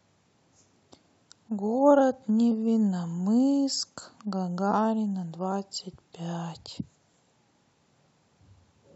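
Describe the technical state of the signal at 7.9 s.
At 7.9 s the audio is intact, with no dropout, clipping, glitch or other technical fault at that point.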